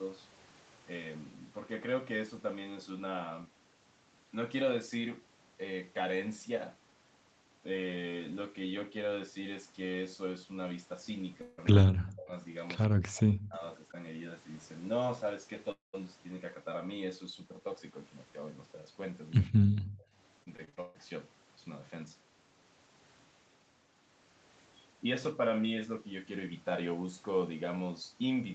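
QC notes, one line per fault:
11.41–11.60 s and 15.72–15.95 s, long network dropout: the stream stops and the receiver stretches the last sound into a fading buzz, about 160 ms in the first case. In the second, about 220 ms is lost and the fill decays into roughly 150 ms of silence. Unlike double-talk suppression, the missing audio never returns, and the likely cause is lost packets.
11.83–12.32 s, 12.88–13.63 s and 19.48–20.10 s, speech suppressed in double talk: the talker's level dips by up to about 40 dB and thins or breaks up in pieces. Nothing is skipped and there is no buzzy fill, which likely points to an echo canceller clamping down on both voices.
12.83–12.88 s, echo leak: a brief copy of the speech appears about 142 ms after the original, roughly 25 dB below it. As a separate delayed repeat rather than a smooth room tail, it likely comes from loudspeaker sound that the far-end echo canceller failed to remove.
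20.43–20.96 s, repeated packet loss (robotic sound): six short holes follow one another, the longest 138 ms, and about half of the span is patched by repeating the last sound. This gives a choppy texture, unlike the single sustained fade of a long dropout. The likely cause is sustained packet loss or late arrival.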